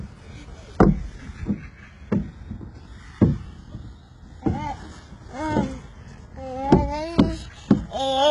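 Throughout, likely HE-AAC compression at a rate that fits about 12 kbps rebuilds the treble from copied lower bands, so the highs sound gritty and metallic, with nothing above 11 kHz.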